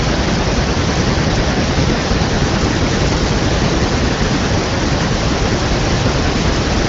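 No technical fault can be heard in the speech, which passes through the AMR wideband (HD Voice) codec at a rate that fits 18.25 kbit/s, with nothing above 7.4 kHz and at most faint coding traces.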